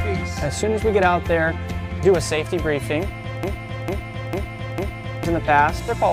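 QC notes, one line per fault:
3.43–5.25 s, broken-record loop: The player or stream path likely stalled and kept re-sending the last fragment it held, a piece 0.45 s long. That fragment plays four times back to back with identical timing and level, so the sound stutters in a rigid, mechanical cycle instead of moving forward. Whatever belonged in those 1.8 seconds is lost, and the audio picks up again after the gap at 5.25 s.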